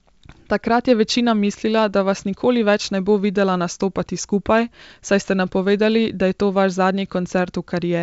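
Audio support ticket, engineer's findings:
Nothing to flag here: the speech comes over a G.722 wideband link that sounds like it's running at 64 kbit/s, with any upper-band hiss from the coding faint at most.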